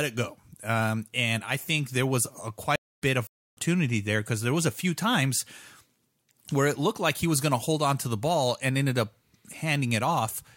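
Speech with two dropouts close together. At 2.76 to 3.02 s, after "think there was a", a stream reconnect leaves about 0.2 s of silence, and a fresh decoder resumes roughly 0.2 s further on. At 3.27 to 3.57 s a playback stall cuts the sound for 0.3 s before "there because there was", likely because the player ran out of buffered data or its thread was blocked.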